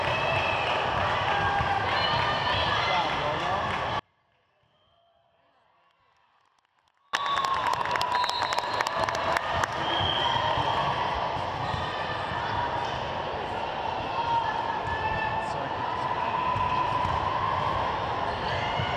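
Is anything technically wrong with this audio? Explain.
Yes. An audio dropout to a faint residue runs from 3.99 s to 7.13 s, about 3.1 s in all. The wanted signal likely stopped reaching the path while everything after the break stayed live, so the gap does not fall to true silence. The sound cuts out abruptly in mid-flow, leaving only a faint residue, roughly 40 dB below its normal level, then snaps back at full strength rather than fading in.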